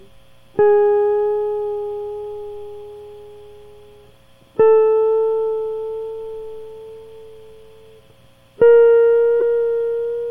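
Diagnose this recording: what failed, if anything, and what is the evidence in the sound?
The failure is in the codec stage: a corrupt frame was decoded. At 9.40 to 9.42 s, near the end of the music, a brief chirp-like burst cuts across the sound, peaking around -10 dBFS. It spans a single frame. Damaged bits in the compressed data were decoded as wrong gains or spectral codes, so energy landed at the wrong frequencies. A spectrogram would show a sharp, isolated block of misplaced energy, and the waveform a short, dense spike.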